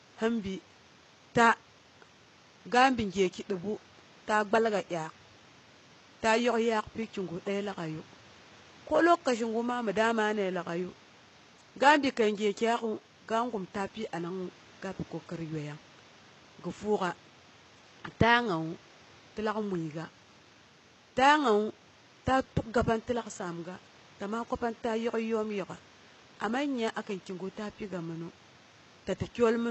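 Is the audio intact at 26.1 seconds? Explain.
No. The speech, including at 26.1 s, was likely squeezed through low-bitrate HE-AAC compression, consistent with about 16 kbps. The treble is rebuilt from copied lower bands, so s sounds come out plainly gritty and metallic.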